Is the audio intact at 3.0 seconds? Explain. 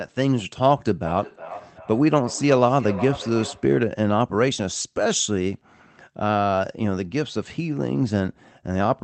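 No. Feedback echo between two devices runs from 1.06 to 3.78 s: a second device replays this microphone's sound, which returns roughly every 0.4 s, thinner each pass and up to about −12 dB. On a spectrogram it appears as evenly spaced, fading copies of each sound.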